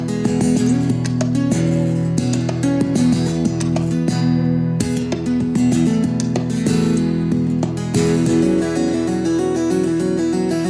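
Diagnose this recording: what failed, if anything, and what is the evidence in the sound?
Nothing in the chain seems to have failed, since no stage leaves any audible mark anywhere in the recording.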